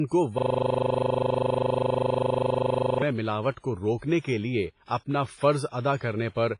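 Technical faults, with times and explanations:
Throughout: WMA compression. The audio sounds heavily damaged, with a ringing, washy quality and hiss that rises and falls with the signal. Nothing is present above 10.5 kHz. The likely cause is WMA encoding at a low bitrate, which fits something around 24 kbps. This transform codec spreads quantisation noise over long blocks of tens of milliseconds. It zeroes weak spectral lines, leaving a smeared, band-limited sound.
0.38 to 3.02 s: system hang loop. A single 40 ms piece of audio repeats exactly, 66 times in a row, at 25 Hz. It is heard as a buzzing, machine-gun stutter. The system froze while the sound hardware kept cycling through the same ring buffer, replaying its contents. The short loop length sets the 25 Hz repetition rate. Normal audio resumes once the system recovers.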